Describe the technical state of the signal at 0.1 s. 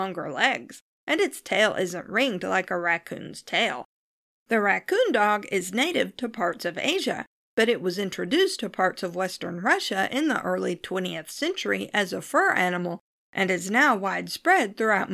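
At 0.1 s the signal is intact, with no dropout, clipping, glitch or other fault audible at that point.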